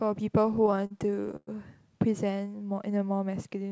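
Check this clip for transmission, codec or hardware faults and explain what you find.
Two faults are audible, both on the receiving side of a call path whose speech is band-limited, with nothing above 8 kHz, which fits G.722 at about 64 kbps.

Repeated stalls (stutter), 0.44 to 1.49 s: the jitter buffer kept running dry because packets arrived late or too slowly. The receiver bridged 17 short stalls by extending the last sound, with the longest about 0.11 s. Roughly 0.29 s was filled this way, about 28% of that stretch. Nothing is lost, but the speech drags and hiccups unevenly.

Jitter buffer slow-down, 2.71 to 3.25 s: the buffer was low or had just raised its target delay, so the receiver built up reserve by repeating single pitch periods and fragments of pauses. This stretched the passage by 55 ms, to about 91% speed. The pitch stays the same while sounds are drawn out, giving a slightly sluggish delivery.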